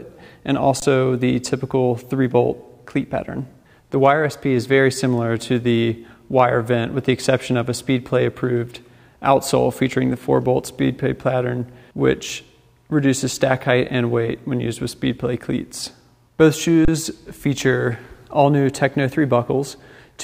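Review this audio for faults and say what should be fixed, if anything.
Twice the output buffer ran dry, an underrun with held sample: at 0.80 to 0.82 s (20 ms) and 16.85 to 16.88 s (30 ms), the converter froze on its last value until data arrived. The waveform goes flat, so the sound halts almost without a click, then picks up where it left off with no audio lost, giving only a soft step on resumption. Enlarging the output buffer or raising the audio thread's priority would keep it fed.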